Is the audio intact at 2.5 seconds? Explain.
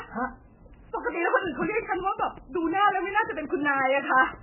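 No. At 2.5 seconds the speech carries MP3 compression, which runs through the whole clip. Nothing is heard above 3 kHz, and weak detail flickers in and out, giving a watery, swirly sound. That likely comes from heavy encoding at a very low bitrate, near 8 kbps.

A train of clicks is also present, from 1.47 to 4.35 s. Around fifteen similar pulses tick at a steady 5.6 per second, some about 5 dB louder than the speech. Interference or a faulty connection is the likely cause.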